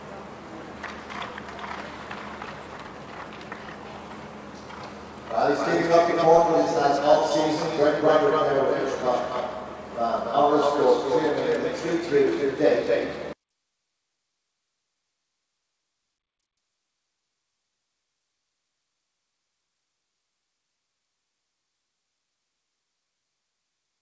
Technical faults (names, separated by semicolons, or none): skip ahead; jitter buffer speed-up